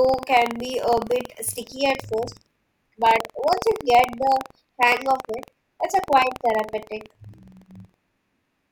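Buffer tearing runs through the whole speech clip: writer and reader of the audio ring buffer have drifted so they cross each period, splicing a small sliver of audio from about a tenth of a second earlier between hard joins. That gives a 21.5 Hz robotic rattle, which fits a 2048-sample buffer.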